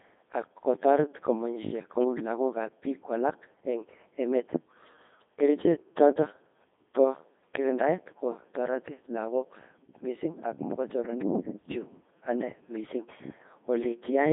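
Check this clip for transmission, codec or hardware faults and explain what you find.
One codec fault runs through the whole clip. A Codec 2 vocoder has carried the speech throughout. It transmits only pitch, voicing, energy and a spectral envelope, then rebuilds the voice from sine waves. The result is robotic and buzzy, heavily damaged, which fits a 2.4 kbit/s mode. The band runs from about 150 Hz to 3.6 kHz, with nothing above 3.7 kHz.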